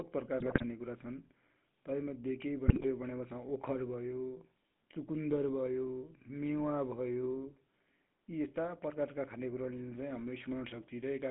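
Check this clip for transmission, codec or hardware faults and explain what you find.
Two faults are audible in this speech: a persistent codec coloration and two short bursts of decoder corruption.

GSM full-rate codec, throughout: the voice sounds buzzy and gravelly, confined to roughly 150 Hz to 3.7 kHz. This points to the GSM full-rate codec at about 13 kbps, which rebuilds speech from a vocal-tract filter fed by sparse, regularly spaced pulses, so fine excitation detail is lost.

GSM bit errors, 0.38 to 0.64 s and 2.68 to 2.85 s: the voice breaks into squawks, pops and gargling. The second burst falls between "तै मध्ये केइ" and "भनेपछा ओखर भयो". Corrupted filter, pitch or gain parameters warp the spectrum or spike the level. The damage fits roughly a dozen and then eight bad frames.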